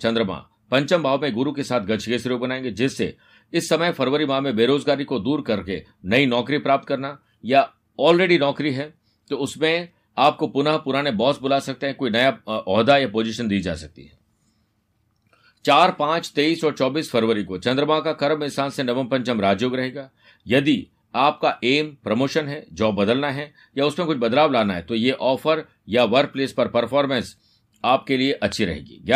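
At 28.52 to 28.54 s a single loud pop, about 5 dB above the speech, cracks over it. This is likely a voltage spike from a plug, switch or static discharge.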